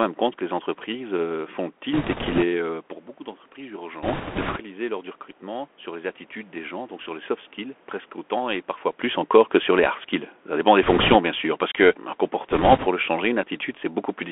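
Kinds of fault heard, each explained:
Bluetooth CVSD headset codec: The whole clip carries the sound of the narrowband Bluetooth headset codec. It sends one bit per sample, each saying only up or down, with a step size that adapts. The speech is confined to a band of about 250 Hz to 3.4 kHz, which fits a 64 kbit/s CVSD link. The codec damage is plainly audible. Loud high sounds outrun the step and distort, s sounds turn scratchy, and a granular hiss lies beneath the speech.
Bit errors on a Bluetooth voice link: Flipped bits on the headset link cause four bursts of rushing, crackly noise, at 1.93 to 2.44 s, 4.03 to 4.60 s, 10.83 to 11.16 s and 12.51 to 12.87 s. The first follows "entreprises euh font le", and the last follows "sûr parce que un". The error rate in each burst points to a few percent. No single bit dominates and errors fade quickly, so there are no isolated sharp clicks. The noise grows with the speech level.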